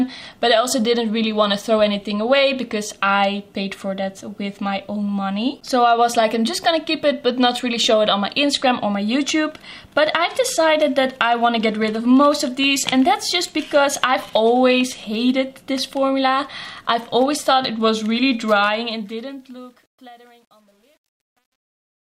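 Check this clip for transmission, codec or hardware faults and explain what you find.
One fault appears, in the closing fade-out. Truncation distortion on the fade runs from 18.61 s to the end at 22.14 s and is worst from 19.43 s onward. The fade is computed at only 10 bits without dither, so as the level falls the waveform collapses into coarse square steps. The tail sounds gritty. A waveform zoom shows staircase steps, and a spectrogram shows broadband hash rather than a clean fade.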